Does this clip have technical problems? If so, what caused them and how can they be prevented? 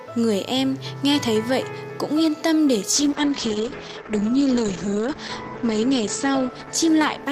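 Yes. A call bitrate drop starts at 2.95 s and runs to the end: the top end collapses from about 20 kHz to 8 kHz and the sound turns coarse and watery, fitting an encoder squeezed from roughly 128 kbps to 9 kbps after the bandwidth estimate fell, bottoming out for 2.35 s. Prevent it by securing a stable, uncongested connection and setting a sensible minimum bitrate floor.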